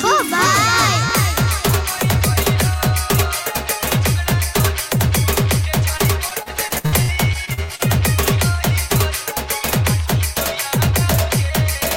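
From 5.97 to 7.81 s there's repeated packet loss, giving a robotic, choppy stretch. Gaps of up to 62 ms keep getting patched by stretching the previous sound, roughly a quarter of it.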